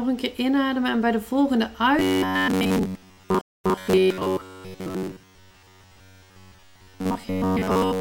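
From 1.99 s to the end, new audio likely arrives too seldom and the player fills the gaps by looping a short buffer of roughly 10.7 ms. Most of the sound is repeats, giving a robotic sound from repeated short buffers: a rigid metallic buzz at 93.8 Hz.

At 3.41 s the stream connection drops, and a stream reconnect follows. The player goes silent for 223 ms, restarts its decoder and resumes 131 ms earlier than where it left off, so a brief stretch repeats before playback settles at 3.77 s.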